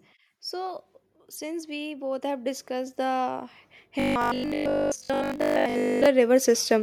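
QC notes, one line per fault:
1.38–6.78 s, automatic gain rising. The level climbs slowly from 1.38 s and keeps climbing to 6.78 s, ending about 11 dB louder. The speech and the background noise come up together, so the room seems to creep closer along with the talker. This points to a gain control that judged the input too quiet and kept adding gain in small steps. That is why it sounds like a gradual swell rather than a jump.
3.997–6.06 s, robotic sound from repeated short buffers. Here the speech turns into a stiff, metallic buzz at 50 Hz. It still loosely follows the rhythm of the speech, but detail is lost. The likely cause is audio arriving too seldom, so playback fills the gaps by looping the last 20 ms or so. Most of the real audio in this stretch is skipped. Each loop repeats every 20 ms, and that fixed repetition rate imposes the flat 50 Hz pitch.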